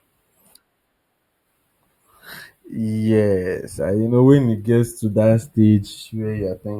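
Channel delay (comb filtering) runs through the whole speech clip. One channel arrives a few samples late, about 0.07 of a millisecond, and the mono sum cancels at spaced frequencies. The first notch sits near 7 kHz, dulling the top and adding a hollowness.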